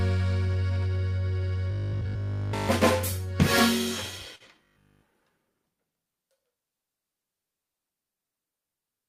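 From 1.71 to 2.69 s the sound turns robotic, with a rigid, metallic 50 Hz buzz. That's likely repeated short buffers, with about 20 ms of audio looping because fresh audio came too seldom.

From 4.35 to 4.43 s comes a burst of packet loss. The last sound is held and fades for about 45 ms, then playback jumps ahead, skipping roughly 40 ms.

The same 50 Hz robotic buzz returns from 4.64 to 5.02 s.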